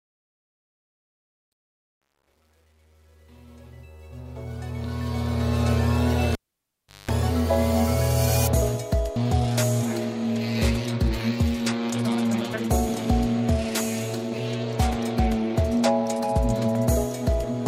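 A gain stage applying the fade-in keeps only about 9 bits and adds no dither, so truncation distortion runs from 0.00 to 5.71 s. While the level is lowest, from the start to about 4.38 s, the waveform collapses into a few coarse square steps, and the rising sound comes through gritty. As the fade climbs toward full level at 5.71 s, the steps shrink relative to the signal and the grit gives way to the smooth fade-in.

A live cable is then pulled and plugged back in between 6.33 and 7.10 s. Its removal gives a pop and about 0.73 s of near silence. Partway back in, with only the tip making contact, a burst of 50 Hz mains buzz lasting about 0.19 s breaks through before a second pop as full contact restores the sound at 7.10 s.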